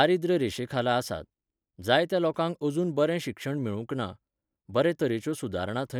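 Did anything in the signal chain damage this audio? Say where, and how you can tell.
No, nothing in the signal chain audibly damaged this audio.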